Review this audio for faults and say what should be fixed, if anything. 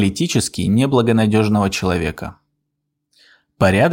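Nothing here needs fixing, as no faults are audible anywhere in the recording.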